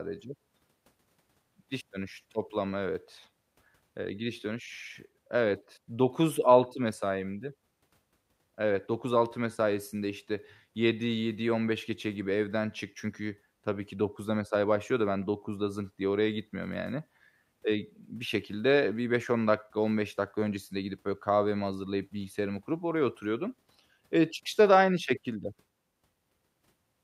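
No technical faults detected anywhere in the speech recording; nothing to report.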